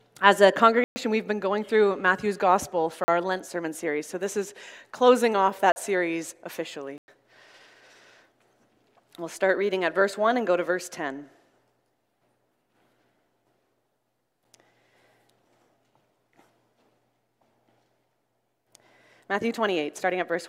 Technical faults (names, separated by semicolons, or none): block of digital silence